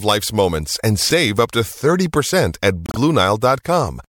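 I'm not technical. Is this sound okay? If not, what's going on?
No. At about 2.86 s the speech stutters: a short piece of about a twentieth of a second is played again twice in a row, filling 2.86 to 2.97 s, so the voice briefly sounds stuck. These are repeated frames. Compressed audio is stored in small chunks, and here a short run of chunks, about 52 ms in all, which fits two chunks, was written or sent more than once. The player plays each copy in turn, making the clip about 0.1 s longer.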